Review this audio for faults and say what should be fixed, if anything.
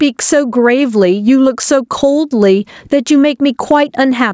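Gain pumping runs through the whole clip, with the level swinging by roughly 15 dB, so loud and soft passages sit squashed together. The likely cause is input gain set far too high, with a fast limiter or compressor clamping down on every peak. On a waveform the peaks look flattened and the gaps visibly fill in. On a spectrogram the noise floor brightens between syllables and darkens under them, up to the 8 kHz ceiling left by the call microphone processing. To prevent it, lower the microphone gain so the limiter rarely engages.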